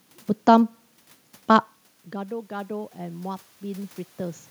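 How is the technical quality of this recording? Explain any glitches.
One glitch stands out. From 2.12 to 4.46 s, voice and room noise swell together by about 8 dB. This is automatic gain rising to compensate after the input fell about 20 dB, once the talker moved away around 1.5 s.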